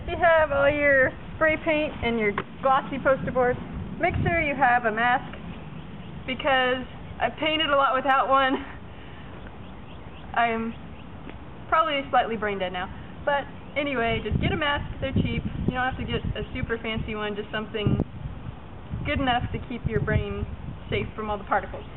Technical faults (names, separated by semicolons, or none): hard clipping